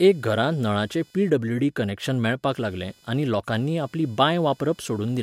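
A faint, buzzy chirping runs under the speech from start to finish, pulsing at a rate of around 500 Hz and sitting roughly 35 dB below the speech. This is computer activity noise: changing load on the processor, graphics card or mouse shifts the ground shared with the audio circuit, so the interference follows the machine's work rather than the speech, rising and falling independently of what is being said.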